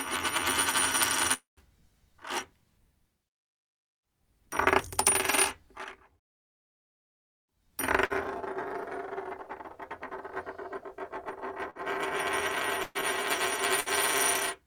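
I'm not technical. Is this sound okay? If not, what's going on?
No. Around 1.33 s the connection likely stopped delivering audio for about a quarter of a second, which is a long network dropout. The player tried to cover the gap by stretching out the last bit of sound into a fading hiss or buzz, then fell quiet before the audio picked up again at 1.60 s. About 240 ms of the original sound is simply gone.

Later, the audio suffers several bursts of packet loss. These are shorter hiccups where small chunks of the audio went missing on the way. They happen at 8.05 s, 11.70 s, 12.83 to 12.98 s, and 13.80 s. Each time, the player held the last sound briefly and let it fade. Most gaps lose about 60 ms, but the one at 12.83 s loses about 120 ms, so it is the longest skip.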